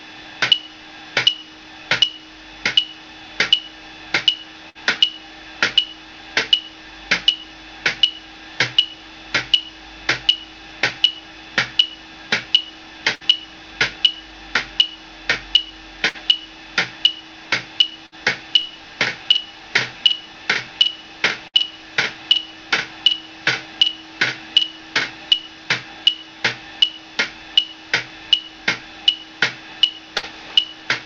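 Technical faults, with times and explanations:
4.69, 13.15, 16.09, 18.06, 21.48 and 30.18 s, burst of packet loss: each time about 60 ms of audio is missing. The receiver holds the last sound for roughly 55 ms, fading it, before playback resumes further along. Unlike a plain dropout, the gap is filled rather than silent.
18.61 to 25.33 s, doubled audio track: a second full-band copy of the sound runs about 0.7 s behind, about 10 dB quieter, likely from a second, slower capture path. Unlike room echo, it has no decay tail, and it starts and stops abruptly.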